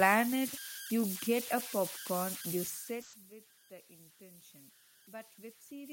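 Converter idle tones run through the whole clip: a whistle near 1.5 kHz sits in the pauses, and a grainy texture clings to quieter stretches of speech, with the error only about 9 dB below the signal. The converter has no dither, so when the input is small its output settles into repeating bit patterns. Those patterns produce a steady pitched tone instead of random noise. The room's own background noise is a separate, natural layer underneath this.

A burst of packet loss occurs from 3.01 to 3.15 s, shortly after the talker shifts position around 2.5 s. About 120 ms of audio never arrived in time to be played. The receiver bridged that stretch by extending the last sound it had and fading it down, which gives a smeared, held quality instead of silence. When playback picks up again, those 120 ms of speech are simply gone, so the speech jumps ahead.

Automatic gain rising begins at 5.05 s and continues to the end of the clip. 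The level reaching the gain control dropped by about 21 dB, and the control responded by raising its gain step by step to compensate. Because the gain applies to everything, the speech and the room background swell upward together over that final stretch, rather than the voice alone getting louder.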